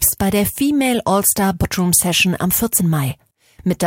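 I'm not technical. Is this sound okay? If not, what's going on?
No. At 2.79 s there are compressed frames skipped: a short run of the encoded speech never gets played, so the audio jumps ahead by roughly a sixth of a second. That leaves a brief glitch at the join, where a small piece of speech goes missing.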